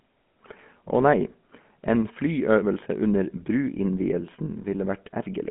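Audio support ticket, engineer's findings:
GSM full-rate codec artefacts throughout. Buzzy, gravelly roughness on the speech, plainly audible. Telephone band, roughly 150 Hz to 3.4 kHz, nothing above 3.8 kHz. Pulse-excited vocal-tract model with coarse excitation, which fits a 13 kbps GSM path.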